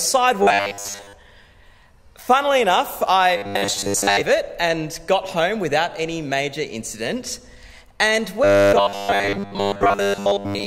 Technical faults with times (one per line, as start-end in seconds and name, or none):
0.43-1.13 robotic sound from repeated short buffers
3.37-4.21 robotic sound from repeated short buffers
8.44-10.66 robotic sound from repeated short buffers